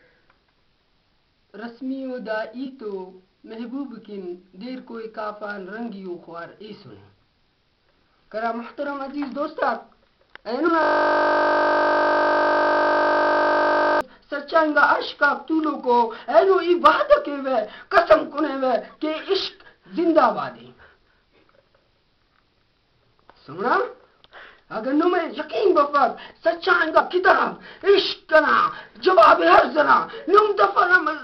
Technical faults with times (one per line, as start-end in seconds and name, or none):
2.65 compressed frames skipped
10.67 compressed frames skipped
10.83-14.01 system hang loop
26.99 compressed frames skipped